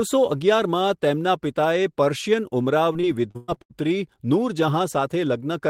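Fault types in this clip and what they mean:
Repeated packet loss (robotic sound): between 2.93 and 3.72 s the speech breaks up seven times, the longest gap 113 ms. Each hole is patched by extending the preceding sound, leaving a choppy stretch about 38% filled in, unlike a single dropout's one isolated gap.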